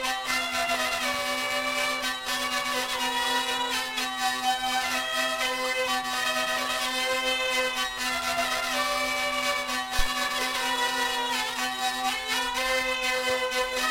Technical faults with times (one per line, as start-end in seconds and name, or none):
9.99-10.07 phantom power thump